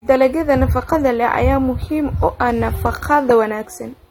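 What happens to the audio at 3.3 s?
AAC compression runs through the whole clip at 3.3 s. Nothing sounds above 17.1 kHz, and a low bitrate, likely near 32 kbps, leaves speech dull, smeared and fizzy.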